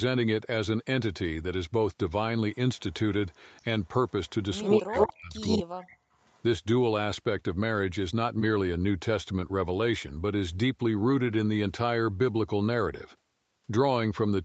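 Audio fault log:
4.61–4.79 s, 4.96–5.08 s, 5.41–5.63 s, 6.22–6.42 s, echo leak: you hear a delayed copy of the far side about 119 ms late, in short scraps, at first around 5 dB louder than the talker, then level, then faint by 6.22 s. That's likely a loudspeaker echo the canceller didn't fully remove.
4.79–5.94 s, speech suppressed in double talk: while both sides overlap, the talker's voice drops out in pieces, at worst by roughly 40 dB, for about a second in total. Likely the echo canceller couldn't tell the talker from the echo and pulled both down.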